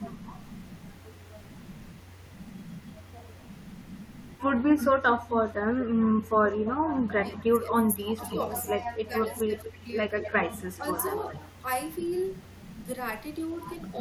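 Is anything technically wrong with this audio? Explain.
Yes. Two faults recur in this speech clip. Echo leak at 4.78–5.35, 6.0–6.52, 7.7–7.75, 8.28–8.86, 9.23–9.35 and 10.21–11.64 s is likely a far-end echo canceller leaving some loudspeaker pickup behind. A distinct copy returns 217–235 ms late, about 5 to 20 dB down. Unlike room reverb, it is a separate repeat rather than a smooth tail.

Speech suppressed in double talk at 7.32–8.39 and 9.07–9.82 s is likely the canceller ducking its own talker along with the loudspeaker echo. Speech dips by up to about 20 dB and 15 dB, for roughly 0.7 s and 0.4 s in total. Unlike a network dropout, it coincides with overlapping talk and echo, and the voice dips.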